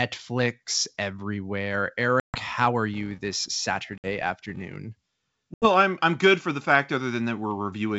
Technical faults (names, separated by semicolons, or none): packet loss on an ADPCM call; filter restarted on every block